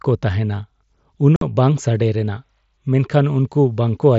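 At 1.36 s the speech drops out for about 52 ms, until 1.42 s: unconcealed Bluetooth headset packet loss over the mSBC link, where several consecutive frames never arrived. Silence or an idle pattern fills the gap with hard, abrupt edges, unlike concealed loss, which would smear or repeat audio across it.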